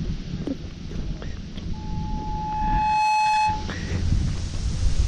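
From 1.73 s a pure tone near 858 Hz swells over roughly a second and a half into a squeal that rises above the surrounding sound, stopping at 3.75 s. This is loudspeaker feedback squeal: the microphone re-captured its own loudspeaker, and loop gain exceeded unity at that frequency.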